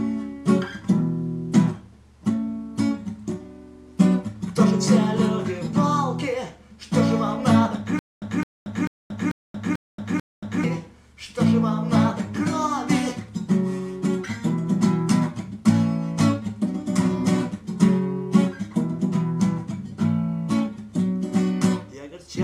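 From about 7.99 to 10.64 s there's a stutter with silent gaps. A short fragment of roughly 0.21 s keeps coming back six times, each one followed by about 230 ms of dead digital silence, so it pulses every 0.44 s or so. That's likely a stalled player or stream replaying its last chunk on each retry, then running dry. Whatever audio belonged in that stretch simply never arrives.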